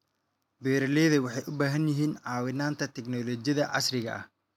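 No technical faults can be heard in this speech recording; the signal stays continuous and intact throughout.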